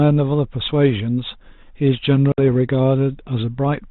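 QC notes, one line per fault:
2.32 to 2.40 s, packet loss on an ADPCM call: about 60 ms of audio, roughly three packets, went missing and was filled with silence. The decoder's adaptive predictor and step size then lost track of the sender's, so the speech comes back from the hard-edged gap with brief, slight distortion before settling.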